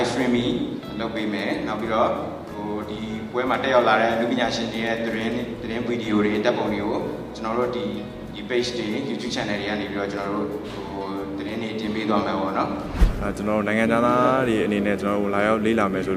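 No dropouts, distortion, level jumps or other technical faults turn up anywhere in the audio.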